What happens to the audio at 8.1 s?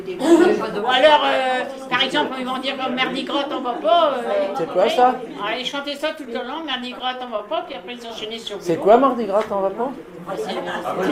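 At 8.1 s the audio is at the tail of a run of repeated stalls (stutter), lasting from 5.71 to 8.12 s. Packets arrived late, the jitter buffer kept running dry, and the receiver extended the last sound to cover 25 brief gaps, none longer than 13 ms. The waveform shows small repeated stretches, and the spectrogram shows smeared vertical seams where the sound drags and hiccups.

A jitter buffer slow-down from 7.96 to 8.50 s overlaps this moment. To rebuild its reserve, the receiver repeated single pitch periods, adding 52 ms and playing at 92% speed with unchanged pitch. The sound is drawn out. The spectrogram shows harmonics stretched horizontally, and the waveform shows near-identical cycles repeated in a row.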